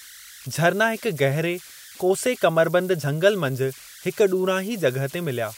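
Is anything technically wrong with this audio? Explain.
Yes. Converter idle tones run through the whole speech clip. The delta-sigma converter appears to lack dither, so when the input gets small it settles into repeating bit patterns that generate a whistle near 1.5 kHz, about 22 dB below the signal. It is heard in pauses and as grainy noise under quiet passages. On a spectrogram it appears as a thin horizontal line, clearest in the gaps; on the waveform it leaves low-level ripple in the silences.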